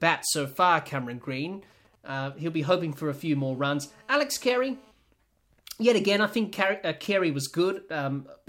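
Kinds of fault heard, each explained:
GSM signalling bursts: A nearby 2G phone sending brief control traffic, its radio pulses rectified by the audio circuit. From 0.30 to 3.36 s this gives a galloping dit-dit-dit of short 217 Hz buzzes, roughly 30 dB under the speech, in clusters rather than continuous.
GSM phone buzz: A nearby 2G phone, now in a call, transmitting 217 times a second without pause, so the rectified pulses form a hard, raspy 217 Hz buzz rich in harmonics from 3.36 to 4.92 s, about 32 dB below the speech, steady rather than clustered.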